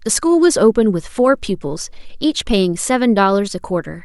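Nothing in this bit of speech sounds off; there's no glitch or hiccup anywhere to point to.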